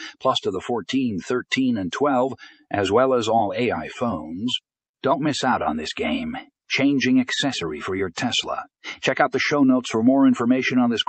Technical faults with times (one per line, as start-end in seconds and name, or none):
2.52-2.73 sound cut by the noise suppressor